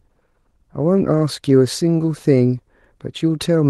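No technical faults are audible.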